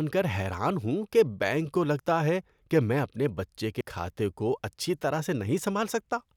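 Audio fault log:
2.00 s, dropped buffer (overrun): likely a buffer was overwritten before the program read it, so about 20 ms after "ہوں کہ بینک کو" is lost, leaving a jump.
3.81 s, dropped buffer (overrun): likely another buffer was overwritten before being collected, removing roughly 70 ms between "کہ میں اپنے بچے" and "کھاتے کو اچھی طرح", so the speech joins with a skip.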